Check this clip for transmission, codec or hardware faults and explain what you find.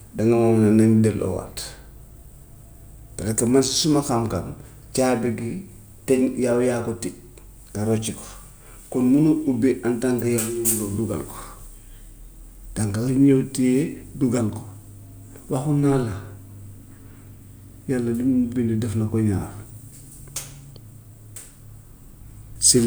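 No transmission, codec or hardware faults can be heard anywhere in the speech recording, so the signal reaches the listener intact and without interruption.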